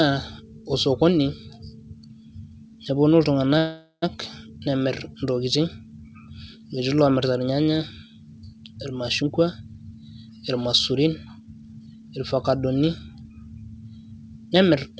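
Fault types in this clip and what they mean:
Call audio freeze: From 3.58 to 4.04 s the speech stalls and its last sound stretches into a fading buzz, ending in about 70 ms of silence. The likely cause is delayed packets emptying the jitter buffer. Speech resumes where it stopped, with nothing lost. A spectrogram shows smeared, decaying bands, then a blank strip.
Jitter buffer speed-up: From 9.22 to 12.10 s the receiver cuts short pitch-period slices to clear a backlog. Speech runs at 110% speed with unchanged pitch, losing roughly a third of a second and sounding hurried. The waveform shows compressed syllables, and the spectrogram's harmonics stay level.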